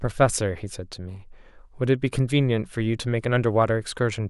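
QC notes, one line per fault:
No faults found on this speech clip.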